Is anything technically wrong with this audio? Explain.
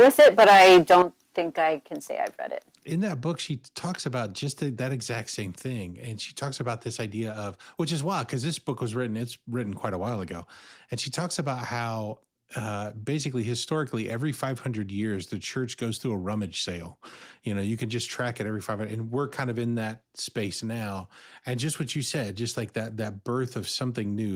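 Yes. The clip has two faults at the very start of the speech.

From 0.0 to 1.02 s there is microphone overload. The likely cause is an input gain set too high, so peaks were driven about 10 dB past the converter's ceiling and their tops were sheared flat, with roughly a fifth of the samples clipped. That gives the loudest syllables a harsh, crackling edge. Unlike codec distortion or a noisy cable, it follows the loudness of the sound and appears only at the peaks.

At 1.02 s the microphone volume is stepped down. This is likely the call software reacting to the clipping by cutting the device's input volume about 10 dB in a single step. Speech and background drop together, instantly, right where the distortion ends. Unlike automatic gain control or a compressor, there is no gradual ramp and no recovery afterwards. The level settles lower and stays there.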